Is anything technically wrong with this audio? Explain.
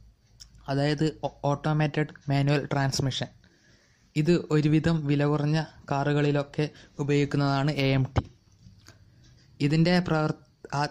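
No, nothing technically wrong can be heard anywhere in this audio.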